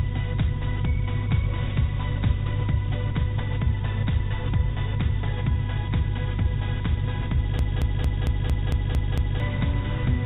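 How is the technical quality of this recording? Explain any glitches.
The recording has one clear glitch, a broken-record loop near the end, heard over audio that carries nothing above 4 kHz, consistent with a G.711 A-law call path at 64 kbps. From 7.59 s to 9.40 s, a 0.23 s fragment repeats eight times back to back, each pass identical. The likely cause is a stalled player, encoder or stream resending its last buffered piece, so the audio meant for those 1.8 seconds is gone. Unlike echo, the repeats don't fade or overlap. Unlike a stutter, the loop is perfectly regular.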